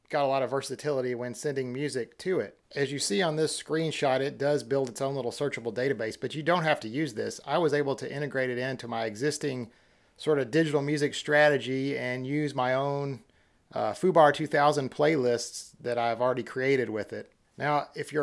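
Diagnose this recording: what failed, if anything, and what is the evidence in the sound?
Nothing failed, and there is no evidence in the sound of any stage going wrong.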